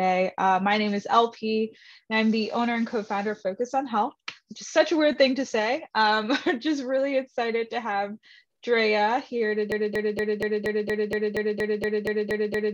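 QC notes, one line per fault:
9.72–12.73 s, broken-record loop: a 0.24 s fragment repeats exactly, back to back, 13 times through to the end, and the audio due in that span never arrives. The player, encoder or stream likely stalled and kept resending its last held piece.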